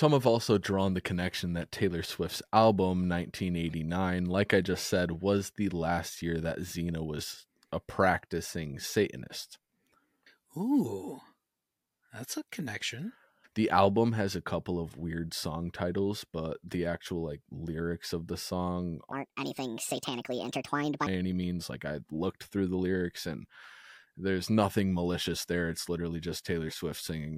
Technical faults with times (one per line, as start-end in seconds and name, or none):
19.12-21.06 section at the wrong speed